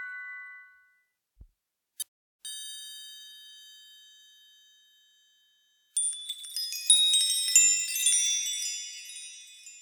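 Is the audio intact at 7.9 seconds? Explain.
Yes, at 7.9 seconds the audio is intact, with no dropout, click, distortion or other technical fault at that moment.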